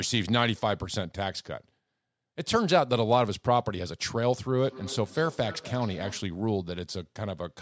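Feedback echo between two devices runs from 4.57 to 6.38 s. A second device on the same call replays this microphone's sound, which gets picked up again beyond the echo canceller's reach, so the speech returns roughly every third of a second, thinner and ringing, peaking about 18 dB below the speech.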